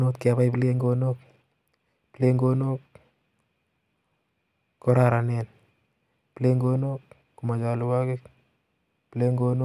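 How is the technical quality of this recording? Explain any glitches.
Nothing technical goes wrong anywhere in this speech recording, so there aren't any glitches to explain.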